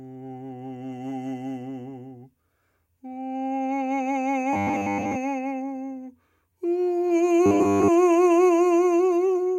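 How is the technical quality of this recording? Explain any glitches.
The recording has two glitches. From 4.53 to 5.16 s and from 7.46 to 7.89 s, robotic sound from repeated short buffers turns the music into a fixed, metallic 100 Hz buzz. A 10 ms slice is likely being looped, with much of the audio skipped. Unlike a stutter, it buzzes rather than audibly repeating.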